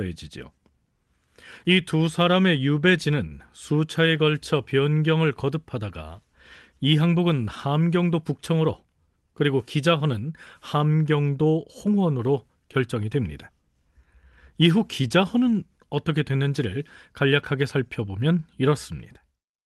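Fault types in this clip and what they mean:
The speech comes through a call path with ordinary codec coding and a top end that stops at about 12 kHz, which fits Opus running at around 32 kbps, and no dropouts, glitches or other disturbances can be heard.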